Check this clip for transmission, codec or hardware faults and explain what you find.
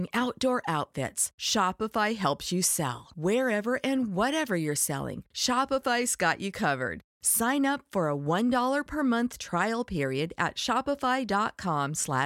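No faults found in this recording.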